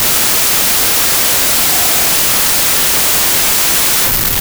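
Loud hiss swamps the music throughout, faster and higher by 1.33 times: wrong sample width, packed 24-bit data read as 32-bit, misaligning bytes.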